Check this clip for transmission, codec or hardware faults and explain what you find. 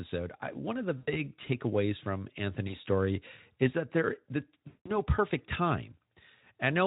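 Three dropouts from VoIP packet loss concealed by the speech codec: 0.97 to 1.21 s after "I one of the", 2.67 to 2.75 s before "story is that there", and 4.67 to 4.98 s after "is that there the". Lost packets forced the decoder to extend its last pitch and filter at falling gain, so the speech smears into a fading buzzy tone or coloured noise. The gaps point to roughly 100, 20 and 180 ms of missing audio, with weak, distorted recovery afterwards.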